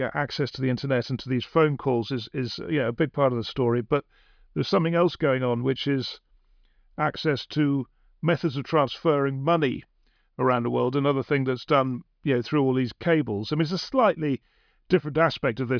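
Nothing technical goes wrong anywhere in this speech recording, so there's no fault to point to at any moment.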